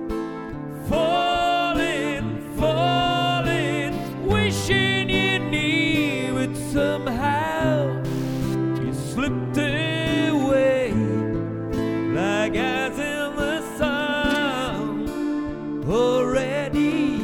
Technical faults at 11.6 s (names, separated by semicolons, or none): none